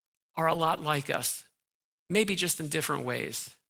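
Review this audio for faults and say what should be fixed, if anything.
From 0.49 to 0.79 s, just before "like us", there is a lost packet rebuilt from error correction. The next packet's low-bitrate copy filled in, so there is no gap. About 160 ms of audio sounds rougher and noisier, which points to several separate losses. Use a more stable network path to reduce packet loss.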